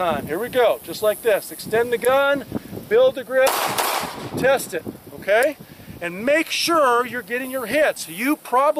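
No technical faults are audible.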